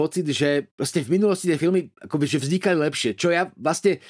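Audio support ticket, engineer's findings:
No audible faults found on playback; nothing to escalate.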